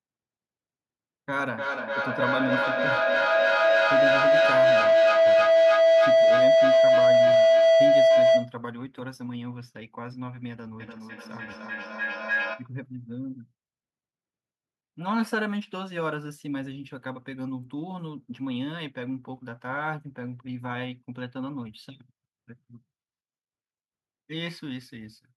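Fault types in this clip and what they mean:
feedback howl: a microphone-to-loudspeaker loop that gains level on each pass. Here it rings near 700 Hz, then later near 1.5 kHz, pulsing roughly every 0.3 s.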